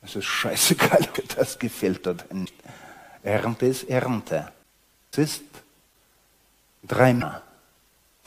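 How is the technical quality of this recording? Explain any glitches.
The recording is marred by four brief glitches, at 1.14, 2.44, 5.11 and 7.20 s, each lasting about 30 ms. They point to a broken MP3 bit reservoir as the likely cause. The sound skips ahead and a chirp, a burst of noise or a short hole replaces it, because after missing frames the decoder reaches back for borrowed data and reads bytes from the wrong frame. The span fits a single MP3 frame of about 26 ms. A spectrogram would show thin vertical smears or gaps, and the waveform a discontinuity.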